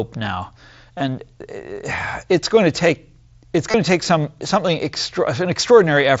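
Concealed Bluetooth headset packet loss at 0.98–1.00 s and 3.71–3.74 s, after "going to take it's": lost headset packets, about 22 and 30 ms, get patched with repeated recent waveform, leaving brief buzzy holds.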